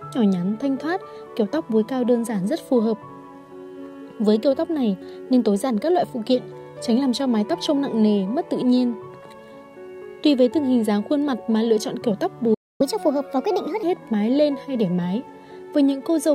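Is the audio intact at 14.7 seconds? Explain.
Yes, the audio is intact at 14.7 seconds, with no dropout, glitch or other fault audible at that point.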